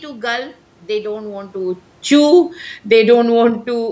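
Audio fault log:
1.56–3.91 s, automatic gain falling: Right after "gulp they don't want", the level sinks by about 4 dB through to the end. The gain control judged the input too loud or its background noise too strong and eased its gain down slowly. Speech and room noise drop together.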